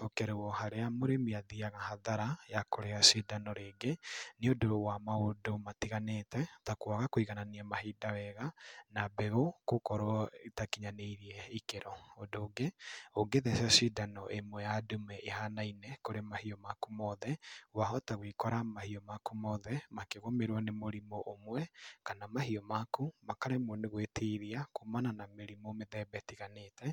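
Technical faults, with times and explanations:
Nothing stood out on a careful listen to this speech recording.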